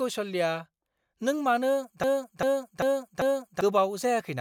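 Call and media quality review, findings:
Broken-record loop, 2.04–3.61 s: a 0.39 s slice of speech repeats four times back to back, and the speech that should have filled that stretch is gone. Likely a stalled player or stream buffer re-sending its last held fragment until it recovered.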